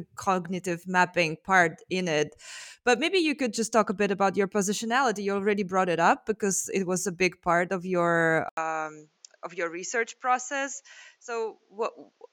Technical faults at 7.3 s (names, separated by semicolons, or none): none